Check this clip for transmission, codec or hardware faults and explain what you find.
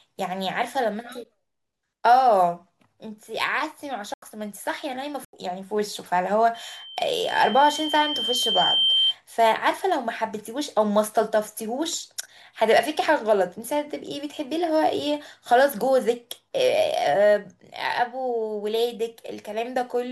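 Two kinds of fault are present in this speech: dropouts from muted corrupt frames, and a loudspeaker feedback squeal.

Corrupt frame muted, at 4.14 to 4.22 s and at 5.25 to 5.33 s: the speech cuts to dead silence for about 86 ms each time, with a hard edge and no fade. Damaged compressed frames were rejected by the decoder, and the player filled their slot with silence. Because the speech resumes on schedule, this is a decoder mute, not a network stall that would shift the timing.

Loudspeaker feedback squeal, from 6.54 to 9.15 s: a single tone at 3.1 kHz rises over roughly two seconds until it sits around 5 dB above the speech. The microphone was picking up the loudspeaker it fed, and at that frequency the loop gain exceeded one, so the tone kept reinforcing itself. Its gradual swell at one fixed pitch separates it from a steady electrical whine or a sudden burst of interference.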